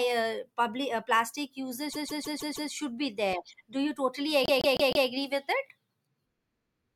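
Repeated frames at 1.92–2.71 s and 4.43–5.06 s: a 157 ms block replays five, then four extra times, causing a stutter and lengthening the speech by 0.78 s and 0.63 s.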